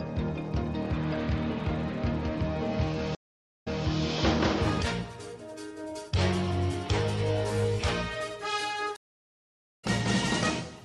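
Two stream reconnects: at 3.15 s the audio drops out for 0.46 s and resumes 0.24 s earlier, repeating a bit; at 8.96 s it goes silent for 0.81 s and resumes about half a second later, skipping ahead.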